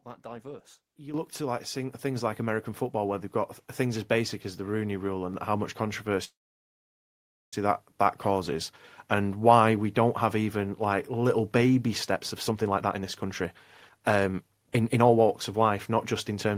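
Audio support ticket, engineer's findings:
Microphone volume stepped up at 1.14 s, just before "look to like": voice and background jump together by about 10 dB in one step. Probable component: sender's automatic input gain raising mic device volume after judging level too low.

Call audio freeze 6.24–7.53 s, after "how much", resuming at "that that causes and". Brief decaying fill, then roughly 1.2 s of silence. Likely cause: delayed packets draining the receive jitter buffer. Nothing lost; playout delay grows by 1.28 s.

Jitter buffer speed-up 12.14–16.56 s, after "even like little baby" to end. Sound runs at about 125% speed, pitch unchanged, hurried. Receiver trimming pitch-period-length pieces repeatedly to shrink an overfull buffer; around a second of audio removed.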